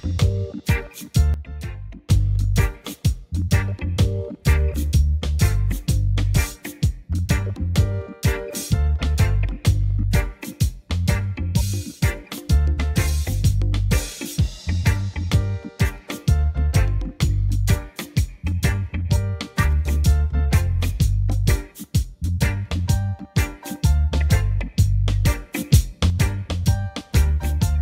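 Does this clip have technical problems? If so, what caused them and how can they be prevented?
Yes. There is a sudden gain jump, most likely a gain setting applied in one step with no ramp. From 1.34 to 2.1 s the level drops by about 12 dB, and from 25.54 to 26.1 s it rises by about 6 dB, with the sound and background noise shifting together. Smoothing every gain change over several milliseconds would prevent it.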